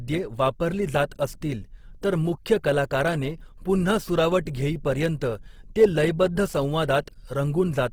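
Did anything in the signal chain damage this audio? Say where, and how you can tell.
Yes. The damage is at the codec stage, likely Opus compression in its CELT music mode, throughout. The speech turns grainy and rough rather than swirly, with bands filled by folding or noise. Bandwidth still reaches 20.2 kHz despite a starved bitrate near 16 kbps.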